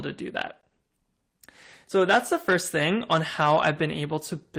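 No technical faults are audible.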